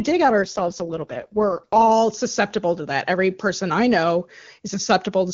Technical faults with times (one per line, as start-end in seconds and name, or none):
0.42-1.91 AMR rate drop